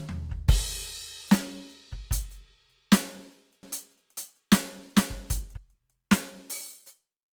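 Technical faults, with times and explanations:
Throughout: Opus compression. The music sounds grainy and rough, with noisy tones but few holes, up to about 20.2 kHz. This likely comes from a low Opus bitrate, roughly 24 kbps.
3.63 to 5.57 s: doubled audio track. A second full-band copy trails about half a second behind, about as loud, dry and abruptly starting. This is likely a duplicated capture path.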